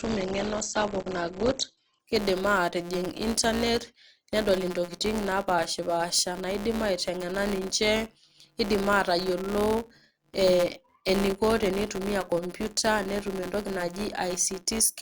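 Adaptive stream starting at a low bitrate, from 0.0 to 2.0 s: the player began on a cheap version of the stream to start quickly. The speech has nothing above 8.3 kHz and stronger codec artefacts, which fits an Opus stream at around 12 kbit/s. At 2.0 s the quality jumps abruptly to full bandwidth with no gap, consistent with a step up to about 64 kbit/s.

Filter restarted on every block, throughout the clip: a filter discards its memory at each block boundary and starts again from silence, so every block opens with a small transient. These form a steady 172 Hz buzz that rises and falls with the speech level, which fits a 256-sample block.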